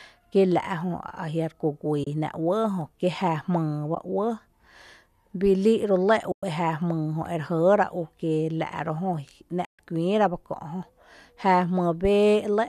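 At 2.04 to 2.07 s, 3.95 to 3.97 s, 6.32 to 6.43 s and 9.65 to 9.79 s, AAC frame loss with muting leaves soft-edged holes of 20 to 140 ms in the speech, as decoded spectrum drops to zero. The light low-delay AAC compression is likely AAC-ELD.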